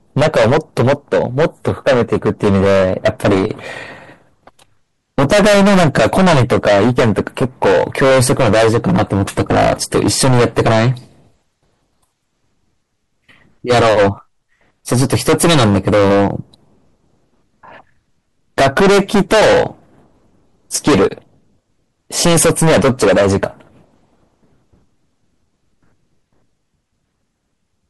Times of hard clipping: 0.17-3.51, 5.18-10.90, 13.69-14.09, 14.92-16.30, 18.58-19.66, 20.75-21.07, 22.18-23.46

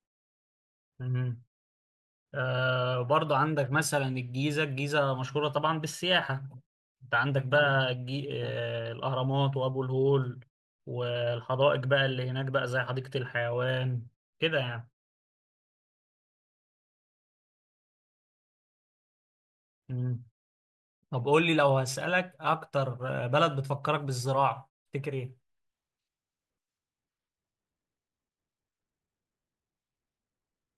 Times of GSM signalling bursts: none

